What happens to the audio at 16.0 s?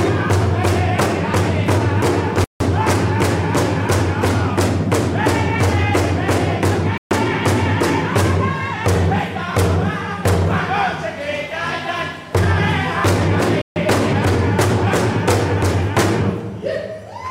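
At 16.0 s you're in the middle of a USB whine, a steady fixed-pitch tone at 1 kHz that comes in at 15.43 s and runs to the end of the clip at 17.31 s. It sits well under the audio, roughly 45 dB down. The pitch gives it away: the USB bus pulls current in 1 ms frames, and that 1 kHz ripple gets into the audio path through the power or ground.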